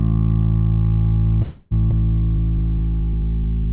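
At 1.42 s the audio stalls and the last sound is carried on as a fading buzz or hiss until 1.73 s, a call audio freeze lasting about 0.29 s. Nothing is lost: playback resumes exactly where it stopped, so the sound after this point arrives late by the length of the stall. The likely cause is packets held up in transit long enough for the jitter buffer to run dry, with the receiver synthesising filler until they turned up.

Shortly after, at 1.91 s, there is a skip ahead: roughly a tenth of a second of audio is dropped and the two sides are butted together with only a tiny join of about 8 ms ending by 1.94 s. The material was dropped while later audio was already waiting, either on the way or by the jitter buffer overflowing, so the content jumps forward abruptly rather than pausing. The narrow band, with nothing above 4 kHz, comes from the G.711 call path.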